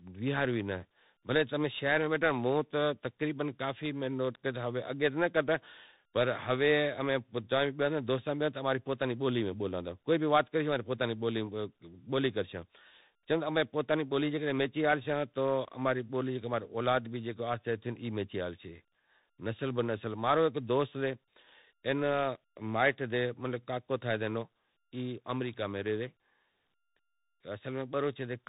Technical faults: tandem speech coding

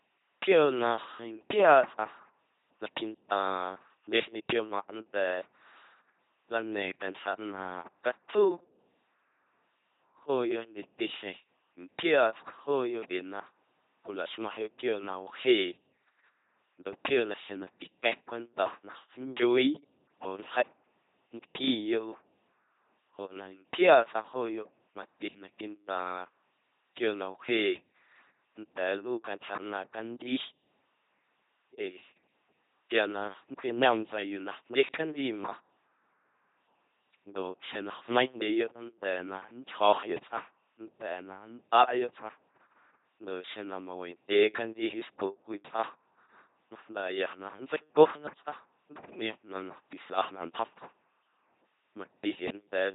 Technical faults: LPC-10 vocoder

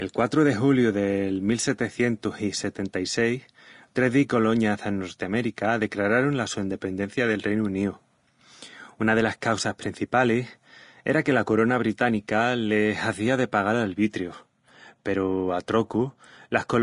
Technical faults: Vorbis compression

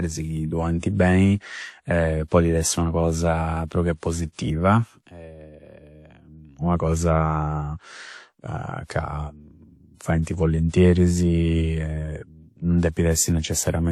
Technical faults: transcoding between lossy codecs

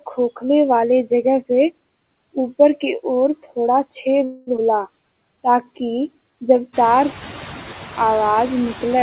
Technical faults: noise suppressor artifacts; call audio freeze; skip ahead; jitter buffer slow-down; system hang loop

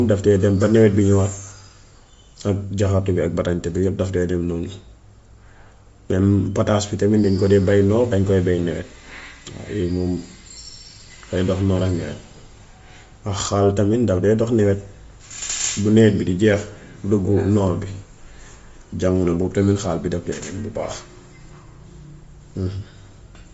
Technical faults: Bluetooth LC3 compression

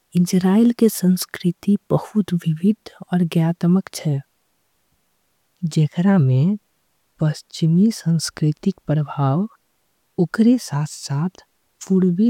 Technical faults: none

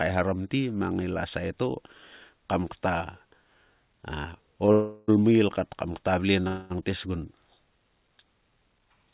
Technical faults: short stall from a late packet; call audio freeze

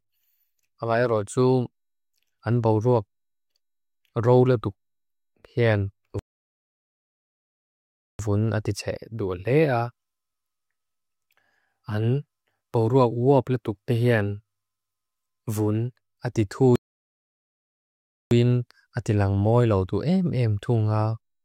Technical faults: playback stall

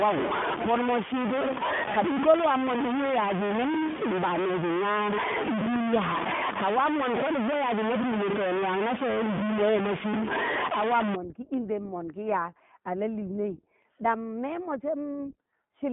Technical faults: iLBC codec; low bit depth without dither

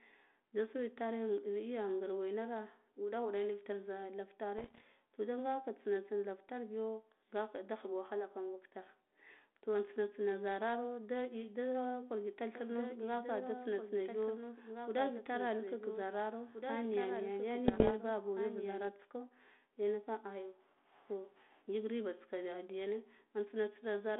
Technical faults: bit errors on an ADPCM link; doubled audio track

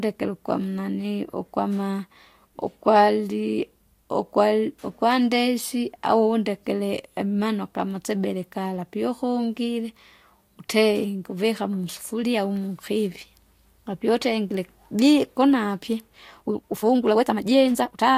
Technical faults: time-stretched section

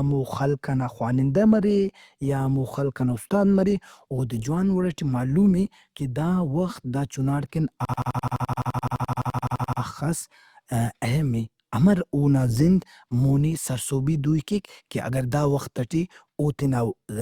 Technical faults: system hang loop

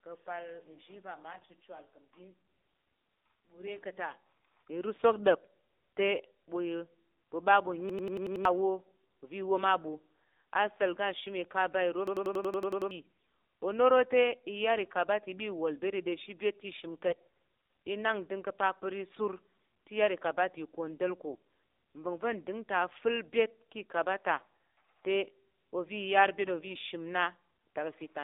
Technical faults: AMR narrowband mobile codec; AMR bit errors; system hang loop

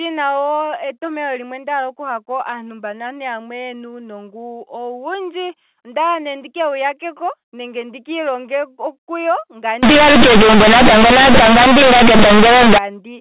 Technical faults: companded audio read as linear

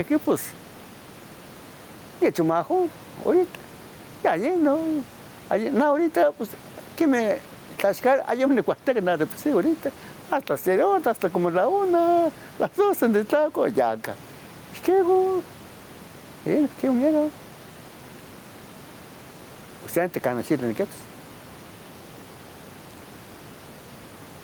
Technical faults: gain pumping

